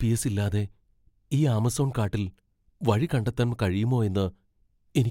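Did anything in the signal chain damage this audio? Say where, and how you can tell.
No, nothing in the signal chain has damaged this audio. No stage from capture to playback leaves an audible mark on the speech.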